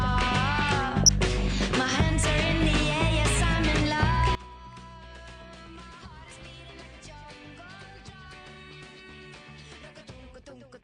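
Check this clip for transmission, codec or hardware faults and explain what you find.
Three faults are present: coarse low-rate coding throughout, two short bursts of DAB burbling, and, from 4.35 s to the end, one channel inverted.

The whole clip carries MP2 compression damage. The likely cause is MPEG Layer II coding at a low rate, one that fits roughly 80 kbps. With that few bits the coder cannot feed all 32 sub-bands, so upper bands drop out and flicker back, and the remaining bands are quantised coarsely. The sound is dull and topped with a granular, gurgling roughness.

DAB burbling appears from 1.03 to 1.29 s and again from 2.78 to 2.87 s. Here uncorrected reception errors at a bit error rate of a small fraction of a percent have slipped into the MP2 data. Corrupted samples put short blips of noise into single sub-bands, and corrupted scale factors make sub-bands jump in level for up to a frame. 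The first burst spans a longer run of frames than the second.

From 4.35 s onward, one channel inverted is heard in the mono sum. The stereo pair has most likely had one side's polarity reversed, so material common to both channels cancels when they are added. The level falls by about 21 dB at that point. Centre content largely disappears, and only a faint residue of what differs between the channels remains.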